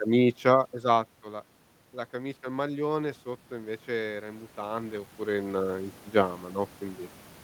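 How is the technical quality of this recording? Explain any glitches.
One glitch stands out: automatic gain rising from 2.1 to 7.1 s. After the input level dropped by about 14 dB, the gain control judged the signal too quiet and raised its gain by about 11 dB over roughly five seconds. The voice and the room noise swell up together. The level shifts near 0.5 s and 5 s come from the talker moving relative to the microphone, not from the system.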